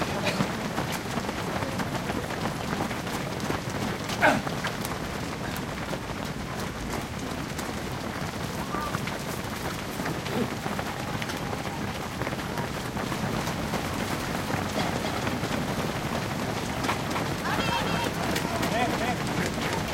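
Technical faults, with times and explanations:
13.06 s to the end, doubled audio track: from 13.06 s a second copy of the full-band sound appears abruptly, trailing the original by about 300 ms and sitting about 5 dB quieter, and it runs to the end of the clip. It has no decay or room colouring, so it is a plain repeat rather than an echo. The likely cause is the same audio being picked up a second time through a slower path, or an edit leaving two copies out of alignment.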